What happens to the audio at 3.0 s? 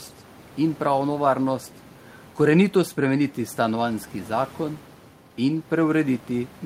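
Nothing goes wrong at 3.0 s: the speech carries on intact there, with only the room noise of the recording space sitting about 25 dB beneath it.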